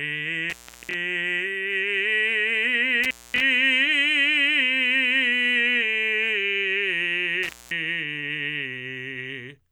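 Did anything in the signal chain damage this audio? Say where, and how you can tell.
Yes. The music drops out three times, at 0.50 to 0.94 s, 3.04 to 3.41 s and 7.43 to 7.71 s, with crackle at each edge and faint hiss between. That is an intermittent contact in the analogue wiring: a loose plug or cable opening for roughly 220 to 340 ms.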